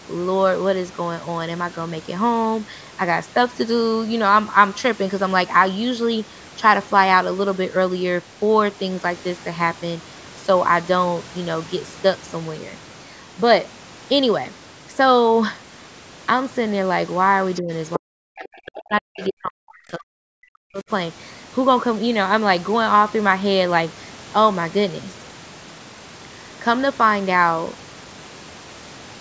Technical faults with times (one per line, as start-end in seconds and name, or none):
17.54-17.61 other side's voice leaking through
17.61-17.71 speech suppressed in double talk
17.96-20.90 speech suppressed in double talk
19.17-19.27 other side's voice leaking through